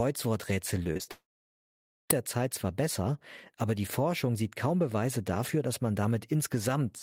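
From 0.83 to 1.09 s the speech breaks up with repeated packet loss, the robotic-sounding kind. Four short gaps fall within about a quarter of a second, the longest only 37 ms, and together they remove roughly 100 ms of audio. Each hole is filled by extending the sound just before it, so 38% of that stretch is patched guesswork, which gives it a choppy edge. The gaps are brief and closely spaced, unlike a single long outage.

Right after, from 1.11 to 2.11 s, comes what is likely a long network dropout. About 980 ms of audio is gone. The receiver first carries the last sound on as a short buzz or hiss that fades, and then about 860 ms of near silence follows before the speech returns with the missing part skipped rather than delayed. That fading tail into silence marks it as a lost stream rather than a clean edit or a deliberate mute, which would cut off abruptly with no smeared carry-over.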